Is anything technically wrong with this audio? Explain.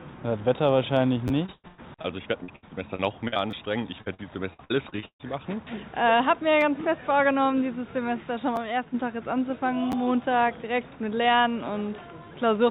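Yes. The device playing this, carried over a G.711 A-law call path that leaves nothing above 4 kHz, ran short of audio five times and suffered bursts of packet loss.

Repeated buffer at 1.28, 3.51, 6.61, 8.56 and 9.92 s: fresh audio arrived late, so playback reused the last block, which fits a 10 ms buffer. It played twice extra at 1.28 and 3.51 s and once elsewhere, each a brief click or buzz.

Repeated packet loss (robotic sound) from 1.46 to 2.06 s, 2.44 to 3.38 s and 4.02 to 5.25 s: packets kept going missing, and each hole was patched by stretching the preceding sound. Gaps up to 133 ms, covering a quarter to nearly half of each stretch, make the audio choppy.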